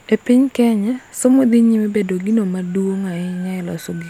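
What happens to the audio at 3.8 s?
Nothing goes wrong at 3.8 s; the audio carries on intact through that moment, with no dropout, click or distortion.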